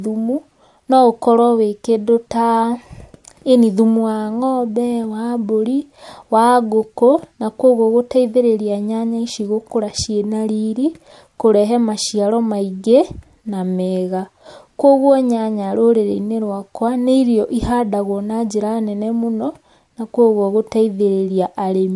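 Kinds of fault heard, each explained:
No technical fault can be heard in the speech recording. There is nothing to list under any heading.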